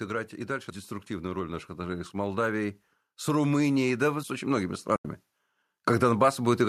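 From 1.07 s to 5.17 s an automatic gain rise lifts the level by about 9 dB. The control judged the input too quiet and raised its gain step by step, so speech and background noise swell together. That shared, slow climb is what separates it from a speaker simply talking louder.

At 4.96 s, just before that rise ends, AAC frame loss with muting leaves a gap of about 90 ms that runs to 5.05 s. The decoder zeroed the missing spectrum, and the overlapping windows fade the sound out and back in. The result is a soft-edged silence, unlike a hard dropout or a repeated-packet stutter. Its length fits roughly nine short frames of about 10 ms each, which likely points to low-delay AAC.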